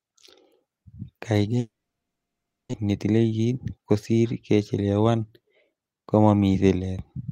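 Packet delivery into this speech recording stops for over a second, and the pattern is most likely a long network dropout running from 1.59 to 2.75 s. With nothing arriving, the receiver stretches the last sound into a brief fading buzz before about a second of near silence takes over. Roughly a second of the original audio never returns, and the speech resumes further along with that stretch simply gone. The delayed packets that follow leave the receiver about a tenth of a second behind, so a jitter buffer speed-up runs from 2.83 to 3.79 s. The buffer trims many short slices, each only a pitch period or so long, to shed that excess. The speech plays at about 110% speed while its pitch holds steady, giving a hurried delivery that settles back to normal pace just before "kosiir kechelewan".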